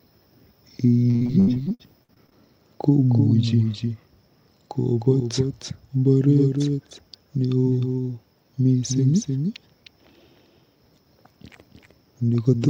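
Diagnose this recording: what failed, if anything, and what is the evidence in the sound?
The doubled audio track runs through the whole recording. A second full-band copy of the speech trails the original by roughly a third of a second, only around 5 dB quieter, with no decay or room colouring. This is a plain duplicate, not a reflection. The likely cause is the signal being captured twice, with one copy arriving over a slower route.

Repeated packet loss (robotic sound) hits at the network stage from 1.10 to 2.36 s. Over that span the sound turns choppy, with more than a dozen short holes, the longest about 75 ms. About a third of the stretch is patched by extending the preceding sound, and the remainder of what was lost is simply missing. The evidence points to packets dropping or arriving too late in quick succession.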